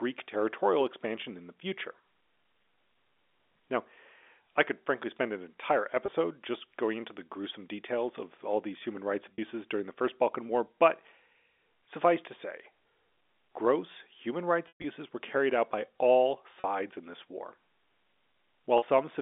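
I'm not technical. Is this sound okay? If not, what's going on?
No. There is packet loss with pitch repetition. Around 6.06, 9.34, 16.61 and 18.78 s, the speech briefly sticks on a buzzy held sound. Around 14.68 to 14.84 s it fades to silence. A plain dropout would cut off abruptly instead.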